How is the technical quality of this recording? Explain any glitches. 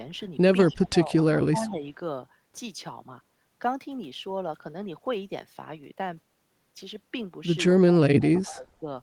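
The recording has two recurring call-processing faults: speech suppressed in double talk in three places, and brief echo leak in two.

Speech suppressed in double talk occurs at 0.69–1.26 s, 1.5–1.83 s and 8.13–8.87 s. The speech dips by up to about 25 dB, 10 dB and 20 dB respectively. This is likely an echo canceller attenuating everything while both ends talked. On a waveform the envelope pinches down, and a spectrogram shows the upper bands thinning or gapping.

Echo leak appears at 0.72–0.88 s and 1.66–1.73 s. A faint copy of the speech trails by 195 ms at about 25 dB below it, likely residue a loudspeaker-side canceller failed to remove. A spectrogram shows a weak, time-shifted duplicate of the harmonic pattern.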